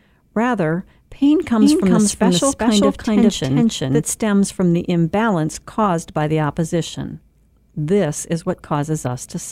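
From 1.61 s to 4.03 s the speech has a doubled audio track. A second, full-band copy trails the original by roughly 400 ms and sits at about the same level. It has no decay and no room colour, so it sounds like a hard, clean echo rather than reverb. It starts and stops abruptly. The likely cause is the audio being captured a second time through a slower path. It ends just before "stems from the imbalance".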